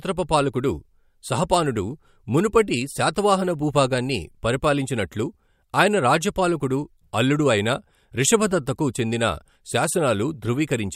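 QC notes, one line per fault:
No faults heard.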